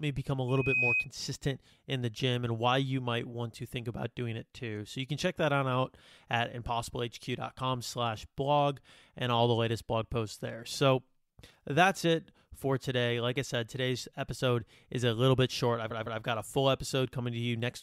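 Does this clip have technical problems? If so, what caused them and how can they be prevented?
Yes. A loudspeaker feedback squeal runs from 0.48 to 1.08 s, right after "me become a". A microphone was picking up the loudspeaker it was feeding, and at 2.5 kHz the loop gain rose above one. That single tone fed on itself and swelled over roughly a third of a second until it sat about 5 dB above the speech. To prevent it, keep microphones behind and away from loudspeakers and lower the gain or notch out 2.5 kHz.

Repeated frames occur from 15.90 to 16.21 s, between "little bit short I've" and "got a full". A 156.7 ms stretch of compressed audio plays two extra times, so the same fragment stutters and adds 313.5 ms to the clip. The block length fits a run of about six codec frames being written or sent more than once. To prevent it, have the recording or streaming chain discard duplicate frames using their sequence numbers or timestamps.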